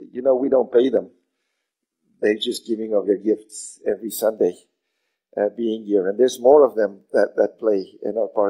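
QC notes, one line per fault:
0.0–4.0 s, adaptive stream starting at a low bitrate: dull, synthetic treble, nothing above 11.8 kHz, stronger codec artefacts, then a sudden gapless lift at 4.0 s, which fits a switch from HE-AAC 16 kbit/s to AAC-LC 96 kbit/s.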